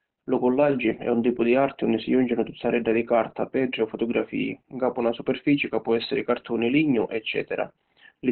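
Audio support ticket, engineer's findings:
Muffled, hoarse speech throughout; spectrogram shows a hard ceiling at 4.2 kHz. Likely Opus compression in narrowband SILK speech mode, which fits a bitrate around 12 kbps.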